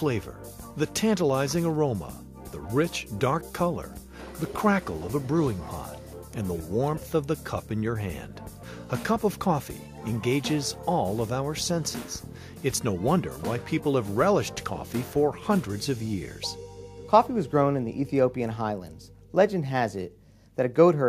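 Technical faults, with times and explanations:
No technical faults can be heard anywhere in this recording.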